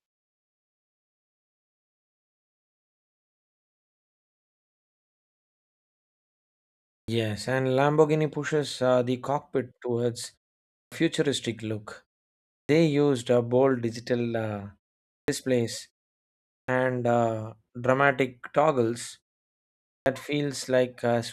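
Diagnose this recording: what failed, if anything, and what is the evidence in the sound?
The playback device is swallowing the front of phrases, a clipped start after a pause. At 6.99, 10.82 (into "futuristic look"), 12.6, 15.19, 16.59 and 19.98 s, about 80 to 98 ms vanishes while the output wakes from silence, so sound starts abruptly.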